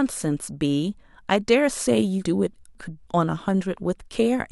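A 250 ms chunk arrived two chunks late, so from 2.25 to 3.0 s chunks out of order jumble the speech, with three hard joins.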